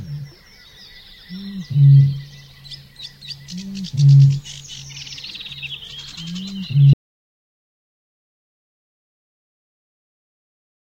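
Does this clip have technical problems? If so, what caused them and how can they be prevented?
Yes. At 6.93 s the sound stops abruptly and the clip stays in total silence for its last 3.9 s, through to the end at 10.87 s. This is an audio dropout to silence, likely a disconnected input or link failure while the recorder kept writing silence. Unlike a fade-out or noise gate, there is no gradual decay and no residual room tone, just an instant drop to silence. Secure cables and links, and monitor input levels while recording.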